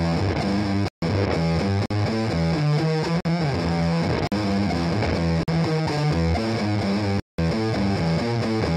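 Blocks of digital silence cut the sound at 0.88 s (140 ms), at 1.86, 3.20, 4.27 and 5.43 s (46 ms each, fitting a 2048-sample buffer), and at 7.20 s (186 ms). The output was most likely not filled in time and played as zeros, so each is an abrupt hole in the sound.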